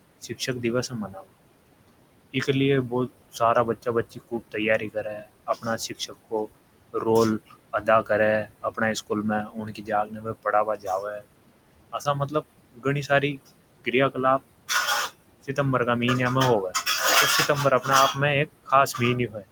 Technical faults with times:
0.00-19.52 noise suppressor artifacts
0.01-1.25 speech cut by the noise suppressor
2.33-11.28 speech cut by the noise suppressor
11.92-15.58 speech cut by the noise suppressor
17.48-19.46 speech cut by the noise suppressor

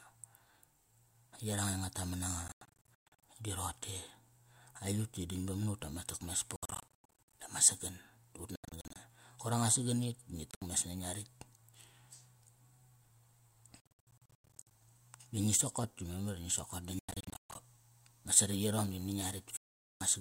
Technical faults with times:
2.48-3.23 Bluetooth dropout
6.56-7.33 Bluetooth dropout
8.56-8.96 Bluetooth dropout
10.51-10.62 Bluetooth dropout
13.80-14.71 Bluetooth dropout
16.99-17.55 Bluetooth dropout
19.57-20.01 Bluetooth dropout

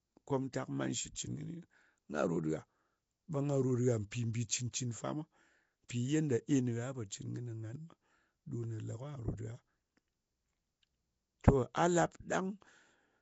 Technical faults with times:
0.00-13.22 Nellymoser compression
1.15 pre-echo
4.11 pre-echo
5.88 pre-echo

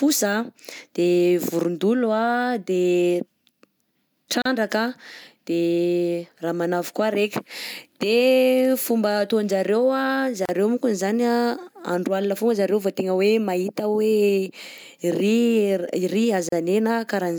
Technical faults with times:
4.42-4.45 gap at a join of encoded pieces
10.45-10.49 gap at a join of encoded pieces
16.49-16.52 gap at a join of encoded pieces

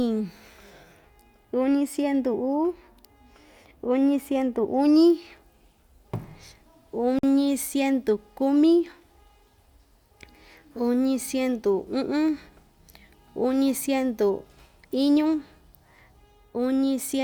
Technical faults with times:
7.19-7.23 block of digital silence

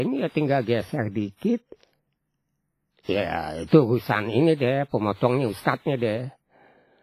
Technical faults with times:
0.00-7.03 WMA compression

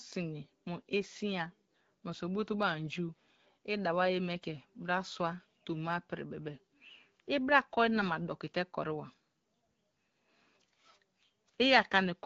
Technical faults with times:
7.96-8.07 AMR bit errors

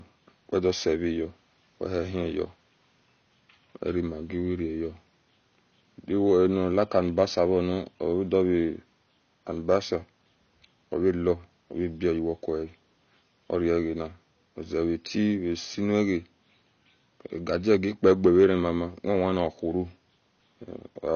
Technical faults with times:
0.00-21.15 AAC compression
6.83-7.22 hard clipping
9.70-9.76 hard clipping
17.71-18.46 hard clipping

